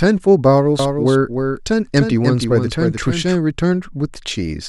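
A second copy of the audio is getting into the mix, most likely from a slower capture path picking up the same signal or an edit that left two copies out of step, so this speech recording has a doubled audio track from 0.79 to 3.35 s. The copy trails by roughly 300 ms and sits about 5 dB below the original, a dry full-band echo with no room decay that starts and stops abruptly at those times.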